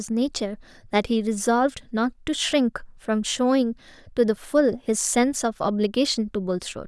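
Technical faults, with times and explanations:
No technical faults can be heard; the signal stays continuous and stable throughout.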